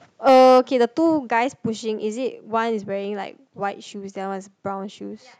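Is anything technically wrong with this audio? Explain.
Yes. From 0.27 to 0.59 s the loudest speech peaks are flattened, giving a harsh, crackling edge. This is likely microphone overload: input driven about 6 dB past the converter's ceiling, with roughly a tenth of samples clipped. The distortion sits on peaks, unlike a broad level change.

Microphone volume stepped down at 0.29 s, by about 2 dB, and again at 1.29 s, by about 4 dB: voice and background drop together in a single step, with no added distortion. The first step arrives during the overloaded stretch, pointing to call software reacting to clipping.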